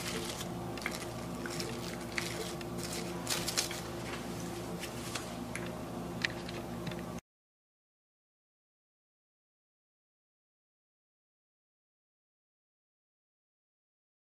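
From 0.04 s to 2.82 s a train of clicks sits over the sound. The pulses come at a steady rate of about 6.9 per second, around twenty in all. Each click has much the same sharp shape. They peak at about 5 dB above the surrounding audio. The result is a regular ticking, audible in quiet moments too. The likely cause is interference from nearby equipment or a faulty connection or power supply.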